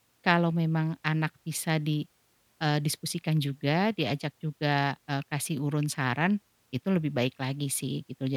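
A recording of speech, with nothing technically wrong to report. No fault can be heard anywhere in it.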